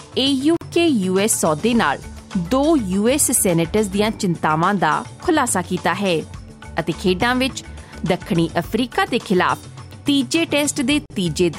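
At 0.57 s and again at 11.06 s, a gap at a join of encoded pieces opens. Separately encoded segments were butted together untrimmed, leaving encoder delay and padding. Gaps of 47 ms and 43 ms open, their edges smeared so the silent part is shorter. The sound then resumes where it stopped.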